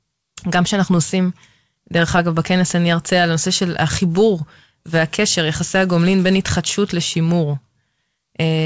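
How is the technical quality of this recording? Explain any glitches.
No glitches are audible; the speech has the band limit of a wideband call path, with nothing above 8 kHz, which fits G.722 at 64 kbps.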